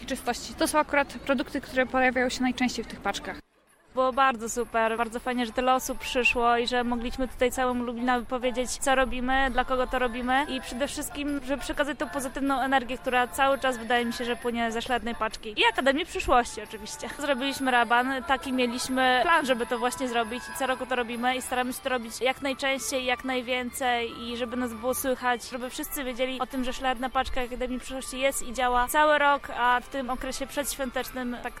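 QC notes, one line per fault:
No fault to note.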